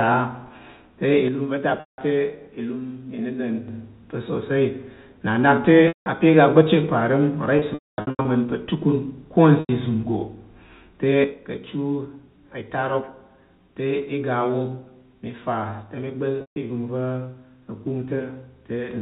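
Speech recording with two kinds of fault. Packet loss with pitch repetition breaks in at 1.8 s (180 ms), 5.88 s (180 ms), 7.59 to 8.25 s (450 ms scattered, longest run 240 ms), 9.6 s (90 ms) and 16.41 s (150 ms). Short gaps sound like a briefly held, buzzy tone, while longer ones fade into silence before the speech returns. On a spectrogram it appears as frozen, evenly spaced harmonics. From 11.24 s to the end, the level steps down by about 6 dB, likely because one stereo channel drops out before the mono sum. The waveform envelope visibly shrinks there. The G.711 telephone coding itself shows nothing above 4 kHz.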